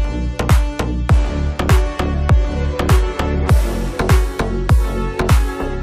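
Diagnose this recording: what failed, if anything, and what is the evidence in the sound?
Nothing failed: no stage in the chain leaves any audible trace, and there is no evidence in the sound of a fault.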